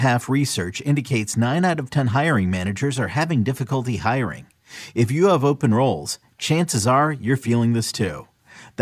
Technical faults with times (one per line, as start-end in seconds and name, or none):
none